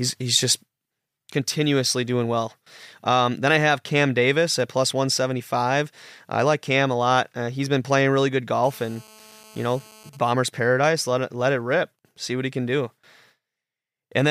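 Right after "been playing really good", from 8.64 to 10.10 s, there's GSM phone buzz: a nearby 2G phone mid-call gets rectified into a raspy 217 Hz drone, about 26 dB down. Then from 10.13 to 12.71 s it turns into GSM signalling bursts, a fainter pattern of even ticks with a longer buzz twice a second while that phone's user is silent.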